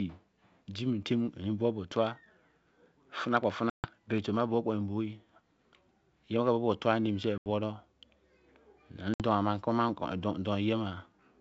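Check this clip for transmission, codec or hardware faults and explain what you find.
Two faults are audible: a block-rate buzz and three dropouts from packet loss. The G.722 wideband coding underneath carries the speech cleanly.

From 1.92 to 4.27 s, a filter restarted on every block produces a buzz near 46.9 Hz. Each 1024-sample block starts from silence, so each block begins with a small tick.

Packet loss on an ADPCM call causes three gaps: 140 ms at 3.70 s, 80 ms at 7.38 s, and 60 ms at 9.14 s. Each one drops several packets to silence. The decoder then resumes out of step with the sender, with brief distortion.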